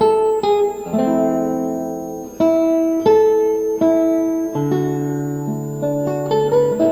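Right from the start and all the way through, there's a switching supply whistle: a thin, high tone wandering between roughly 6.3 and 8.3 kHz, centred near 7 kHz, sitting well down, around 30 dB under the sound. That's a power supply running in audible burst mode or beating with another one and leaking into the audio.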